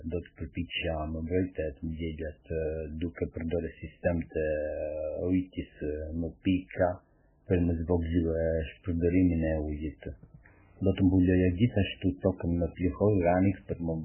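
Throughout the speech, the encoder appears starved of bits, likely from MP3 compression at a very low bitrate, around 8 kbps. Nothing survives above about 3.1 kHz, and the heavy damage leaves weak frequency lines flickering between frames, so the speech sounds muffled, watery and swirly, with smeared consonant attacks.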